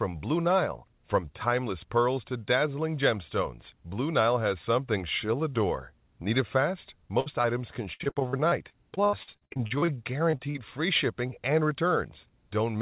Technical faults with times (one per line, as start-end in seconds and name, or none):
7.20-7.28 burst of packet loss
7.42-7.46 short concealed packet loss
7.94-9.98 repeated packet loss (robotic sound)
10.31-10.56 short concealed packet loss